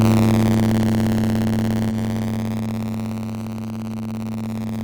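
Buffer tearing runs through the whole recording, from start to finish. The program filling the playback ring buffer and the hardware draining it have drifted out of step, so their positions cross inside every period. A small slice of each buffer, about 7%, still holds audio from about 30 ms earlier, with hard joins on both sides. That repeating splice puts a robotic buzz at 93.8 Hz over the sound, which fits a 512-sample buffer.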